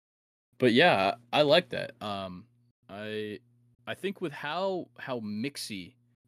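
Zipper noise runs from 1.72 to 2.48 s as the speech is turned down by roughly 10 dB in 1 dB jumps, about thirty a second, with no smoothing between them. Each jump leaves a small click, so a fast ticking rides on the fade.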